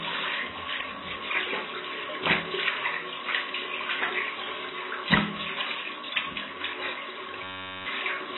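Throughout the clip, the encoder has discarded most of the fine detail, which points to likely AAC compression at a very low bitrate, somewhere around 16 kbps. Nothing is present above 4 kHz, so the sound is dull and muffled, and the heavy quantisation leaves a smeared, warbly texture with a fizzy edge wherever the sound holds steady. The damage is constant from start to finish rather than coming and going.

From 7.44 to 7.86 s, a system hang loop takes over. The machine stalled while the audio hardware kept replaying the same short stretch of its ring buffer, a 10.67 ms slice that fits a 512-sample buffer. Repeated dozens of times at 93.8 Hz, it becomes a steady, hard-edged buzz in place of the real audio, and close to half a second of sound is lost beneath it.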